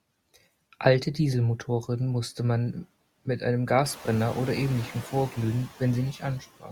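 From the start, the noise suppressor artifacts are there the whole way through. The suppressor is pulling the steady background down by about 17 dB, working band by band, frame by frame, so the noise drops away in the gaps and creeps back up under the speech. It gets more noticeable after roughly 4 s, when the room noise comes up by about 13 dB and still sits around 20 dB under the speech, giving the suppressor more to chew on.

Right at the tail, from 6.6 s to the end at about 6.72 s, there's speech cut by the noise suppressor. It mistook the last bit of the voice for background and dragged it down along with the noise, as much as about 16 dB at the deepest point. That's only around a tenth of a second, but the final sound gets swallowed and fades out faint instead of finishing cleanly.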